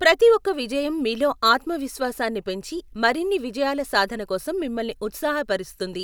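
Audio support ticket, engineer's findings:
Speech clip reviewed in full, no audible faults found, no action required on the playback or capture path.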